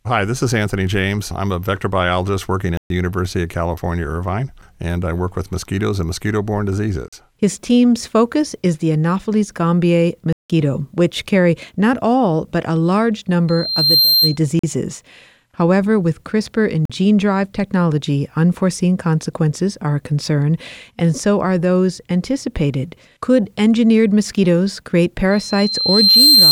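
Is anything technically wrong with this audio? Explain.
Yes, the speech has two kinds of fault: repeated blocks of digital silence and two bursts of loudspeaker feedback squeal.

The blocks of digital silence come at 2.77–2.90 s (128 ms), 7.08 s, 10.33–10.50 s (171 ms), 14.59 s and 16.85 s. The three short ones each last about 43 ms, which fits a 2048-sample buffer at 48 kHz, and the 171 ms gap fits an 8192-sample block. Each is most likely a stretch where the output buffer was not filled in time and zeros went out instead. The signal drops straight to nothing and returns with no fade. All of them sound like brief holes in the speech. The waveform shows flat near-silent segments with abrupt vertical edges, and the spectrogram shows blank columns with abrupt edges.

The loudspeaker feedback squeal occurs at 13.48–14.37 s and again from 25.31 s to the end of the clip. In both, a microphone is picking up the loudspeaker it feeds, and at 4.2 kHz the loop gain exceeds one, so that frequency reinforces itself. 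The first squeal swells over about half a second to roughly 5 dB above the speech. The second builds over about a second to roughly 10 dB above it. On a spectrogram each appears as a single bright horizontal line at 4.2 kHz that thickens as it grows. The waveform shows a rising sinusoidal envelope riding over the speech.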